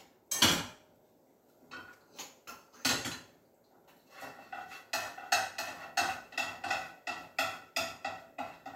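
From 5.02 s to 6.92 s a doubled audio track appears: a second full-band copy trails the original by roughly 0.7 s, around 5 dB quieter, with no decay or room colour, starting and stopping abruptly. Likely a slower second capture path mixed back in.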